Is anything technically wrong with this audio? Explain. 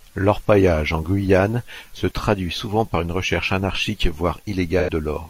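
Yes. From 4.79 to 4.90 s, an 85 ms smeared, noisy patch interrupts the speech. This is AAC frame loss with concealment, fitting two lost frames patched from the last good spectrum.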